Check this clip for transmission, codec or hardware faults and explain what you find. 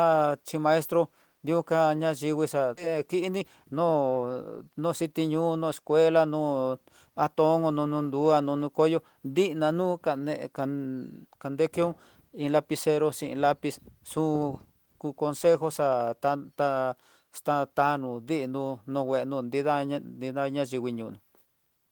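Two faults are audible, both early in the clip.

At 2.77 s, a skip ahead: about a second of audio is dropped and the two sides join directly. Unlike a dropout, it leaves no silence.

From 2.87 to 5.13 s, a jitter buffer speed-up trims short pitch-period slices, running about 9% fast at unchanged pitch. It sounds hurried, unlike a plain resampled speed-up, which raises pitch.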